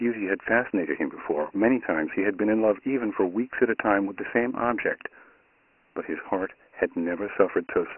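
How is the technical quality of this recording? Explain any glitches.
The quality is poor throughout, limited by a single telephone-style coding fault. Dialogic VOX ADPCM runs the full clip: 4-bit prediction at 24 kbps, fitting 6,000 samples a second, cuts everything above 3 kHz and trims lows, leaving heavily gritty, hissy speech.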